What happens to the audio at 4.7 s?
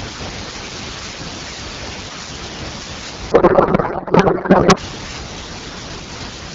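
At 4.7 s the clip is inside a codec payload misread running from 3.31 to 4.78 s. Octet-aligned AMR frames are being unpacked as bandwidth-efficient, so every field lands in the wrong place and the speech gives way to garbled noise and warble that barely tracks it.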